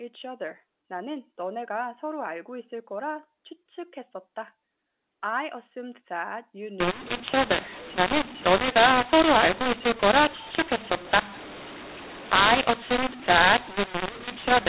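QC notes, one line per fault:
6.80–14.68 s, mu-law and A-law mixed up: A-law samples decoded as mu-law, so levels scramble into harsh distortion, pauses filling with noise. Waveform shows jagged peaks; spectrogram shows broadband noise below 4 kHz.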